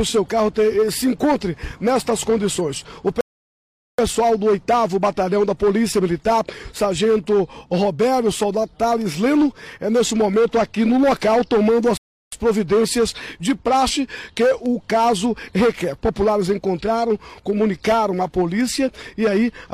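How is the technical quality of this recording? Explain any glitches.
Two rebuffering stalls interrupt playback. At 3.21 s the sound drops to silence for about 0.78 s, and at 11.97 s for about 0.35 s. Each time it picks up exactly where it stopped: the player ran out of downloaded audio and waited, adding time without losing any content.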